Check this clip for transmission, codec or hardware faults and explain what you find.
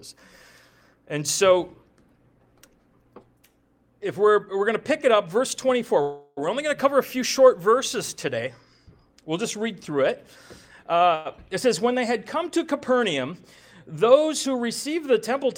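Two kinds of fault turn up here: a couple of call audio freezes and a jitter buffer speed-up near the end.

Call audio freezes at 6.01–6.39 s and 11.15–11.27 s: the sound stalls into a fading buzz for about 356 ms, then 102 ms, likely from packets held up until the jitter buffer ran dry. It resumes where it stopped, so nothing's lost, just delay added.

Jitter buffer speed-up from 14.47 to 15.44 s: after that built-up delay, the receiver trims repeated pitch-period-sized slices, about 50 ms in all, so the audio runs roughly 5% faster at unchanged pitch and feels slightly rushed.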